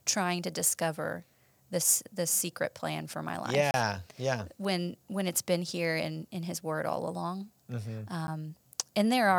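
The output buffer likely went unfilled twice, so blocks of digital silence cut into the speech: about 30 ms from 3.71 to 3.74 s, just after "plan for my life", and about 10 ms at 8.27 s. The abrupt cuts are heard as a brief hole and then a tick.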